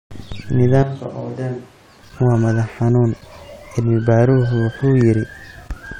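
From 0.83 s to 2.03 s the speech abruptly turns roomy and hollow, losing its low end and dropping roughly 10 dB in level, while background noise rises to sit only about 25 dB below the voice. The close, full sound snaps back just before "waa madax xanuun". This is a switch to a distant microphone, likely because the close mic's signal dropped out and a farther pickup, such as a camera mic, filled the gap.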